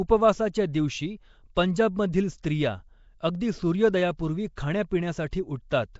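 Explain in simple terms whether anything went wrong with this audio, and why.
The whole recording has a rough, hissy, somewhat underwater sound with nothing above 7.7 kHz, most likely from Nellymoser compression, the old Flash microphone codec. It spends very few bits on chunks of sound and fills the quieter frequency bands with invented noise. Unlike ordinary background hiss, that noise follows the speech itself.

There is also pre-echo at 1.55 s and 4.56 s. A brief hiss of about 15 to 16 ms arrives just before a sharp onset, because the codec spreads its error across the whole chunk, including the silent moment before the attack. A true echo would come after the sound, not before it.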